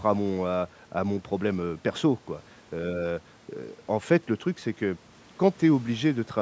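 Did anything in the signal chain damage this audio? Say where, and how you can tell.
No, nothing damaged this audio.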